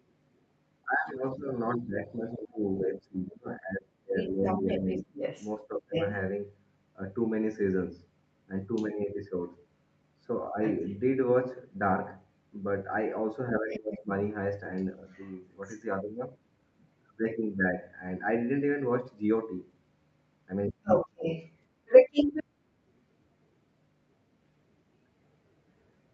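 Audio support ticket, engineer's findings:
Speech suppressed in double talk at 0.84–5.96 s, 10.49–15.0 s and 20.71–21.27 s. The talker dips in pieces while the far side speaks: about 25 dB for roughly 3 s, then about 20 dB briefly, then a near-cutout of about 40 dB. Likely an echo canceller ducking both signals when it could not separate them.

Other side's voice leaking through at 1.73–16.88 s, about 5 dB under the talker, and 20.87–22.44 s, about 5 dB above. A second voice is audible over the speech. Likely residual loudspeaker echo left in the microphone signal. The band tops out at 8 kHz, which fits an Opus call path at around 64 kbps.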